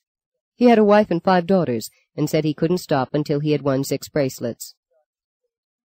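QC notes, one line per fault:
Nothing to flag here; no problems turned up anywhere in the audio.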